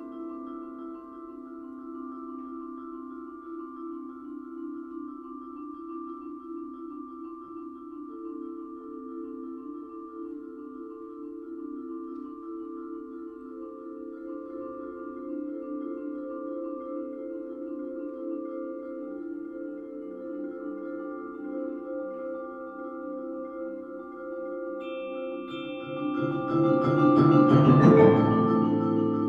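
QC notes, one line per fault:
No faults found.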